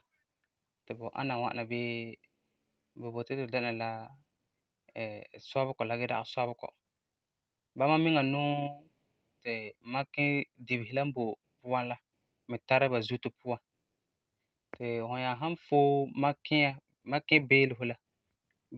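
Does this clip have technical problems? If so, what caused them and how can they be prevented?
No, nothing in this speech clip stood out as a technical problem on listening.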